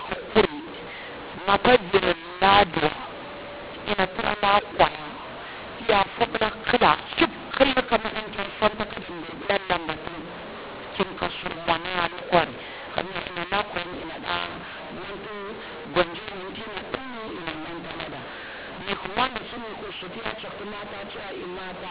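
From start to finish, this speech has a mu-law and A-law mix-up: audio encoded on the mu-law curve is decoded as A-law, scrambling levels into harsh distortion and lifting near-silent samples into noise. The waveform shows jagged, misscaled peaks and raised pauses. The spectrogram shows noise smeared up to the 4 kHz telephone ceiling.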